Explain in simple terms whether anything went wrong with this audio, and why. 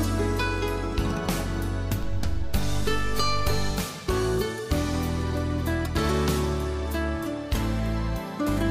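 A DC step starts at 2.03 s and lasts until 3.71 s. The waveform's zero line suddenly shifts off centre and then returns, like a floor tilting briefly. Each shift is heard as a low thump or click, while the sound itself carries on unchanged.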